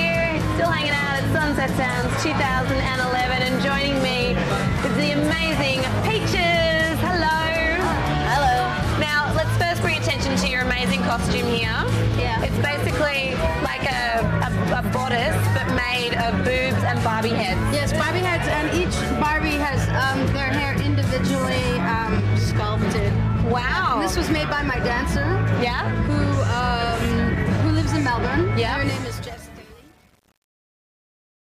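Damaged data in a compressed stream shows up at 27.29 s as a brief disturbance, where the decoder misread a corrupted frame, lost sync and skipped to the next frame header before carrying on with the audio. Truncation distortion on a fade runs from 28.83 s to the end. The quiet tail of the fade turns gritty, worst from 29.15 s onward. The level is being reduced in coarse undithered steps, which fits an 8-bit gain stage collapsing the waveform into a few square steps.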